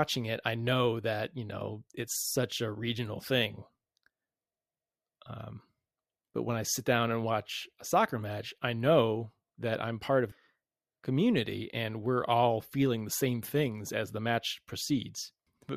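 At 10.31 to 10.34 s, just after "that I'm part of", the speech jumps abruptly forward with a brief blip, and the sentence resumes at a later point with no natural pause or transition. The sound points to a stream segment skipped: one chunk of the segmented stream likely failed to load, and the player moved straight on to the next. A stretch of the programme would then be missing, with only a tiny join audible at the splice.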